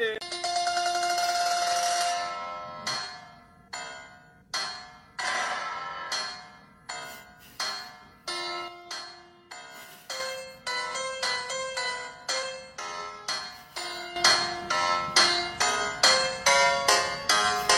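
Sudden gain jumps at 8.68 s, where the level drops by about 6 dB until 10.2 s, and at 14.16 s, where it rises by about 11 dB to the end. Sound and background noise step together, likely a gain setting applied without a ramp.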